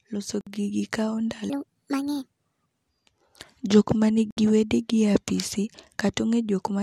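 At 0.41 to 0.47 s the speech drops into a 57 ms silence, just before "gigi kawo", then resumes where it stopped. This is a gap at a join of encoded pieces: separately encoded segments were joined untrimmed, leaving encoder delay and final-frame padding in place.

From 1.50 to 2.89 s, right after "loso gigi kawo", the speech turns high and hurried, running 1.48 times fast and about seven semitones sharp. This section at the wrong speed likely comes from playback or editing against the wrong clock, shifting speed and pitch together.

A second join gap, 65 ms long, cuts in at 4.31 to 4.37 s, with the same kind of silence.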